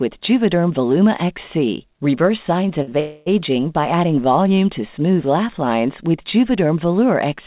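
A short stall from a late packet comes at 2.82 to 2.89 s, then again at 2.89 to 2.94 s. Each time the jitter buffer ran dry and the receiver stretched the last sound, for 51 ms and then 26 ms, so it is held too long with a buzz or dip before resuming in place.

A call audio freeze follows at 3.00 to 3.40 s, likely from packets held up in transit emptying the buffer. The last sound is carried on for about 265 ms as a fading buzz or hiss, never dropping to silence, then the audio picks up where it stopped, so a gap has been inserted. Throughout, nothing is heard above 4 kHz, which fits the narrowband G.711 call codec.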